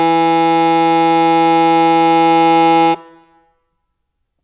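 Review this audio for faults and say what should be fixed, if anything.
Nothing in this music needs to be fixed, as there are no faults to report.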